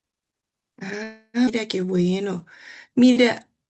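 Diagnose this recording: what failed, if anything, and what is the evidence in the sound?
From 1.03 to 1.37 s the speech stops and the last sound is stretched into a fading buzz, ending in a short silence of about 60 ms before the speech resumes exactly where it left off. This is a call audio freeze at the network and jitter-buffer stage, likely from packets held up in transit so the buffer ran dry and the receiver concealed the gap. Unlike a skip, nothing is lost; about 0.3 s of filler is inserted.

Shortly after, at 1.46 to 1.50 s, the speech jumps forward with almost no gap, joining two points that don't belong together. This is a skip ahead at the network and jitter-buffer stage: roughly a fifth of a second of audio was discarded, most plausibly to shed the delay the freeze had just added. The jump itself gives it away: the splice is nearly seamless, but material is missing, the reverse of a freeze.

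From 1.67 to 2.39 s and again from 2.90 to 3.67 s the speech drags at unchanged pitch, running at about 88% and then 90% of normal speed, with drawn-out sounds. This is a jitter buffer slow-down: the receiver repeated single pitch periods to rebuild its reserve, adding 92 ms and 86 ms. Constant pitch separates it from a clock or tape-speed error, which would lower the pitch too. All of this sits on an Opus call path whose 8 kHz audio bandwidth softens the top end.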